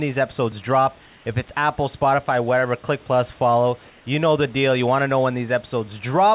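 A speech recording in which the room background is twice replaced by comfort noise, from 1.06 to 1.26 s and from 3.9 to 4.06 s. The pauses are likely filled by the receiver after discontinuous transmission. Unlike a dropout or noise gate, the gaps never fall silent. A steady, featureless hiss, only about 1 to 2 dB quieter, stands in for the real background.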